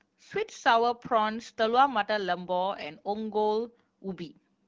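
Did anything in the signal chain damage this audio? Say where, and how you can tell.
No, nothing in the chain damaged this speech; it carries the band-limited character of the AMR wideband (HD Voice) codec at a rate that fits 12.65 kbit/s, and that stage is doing its job.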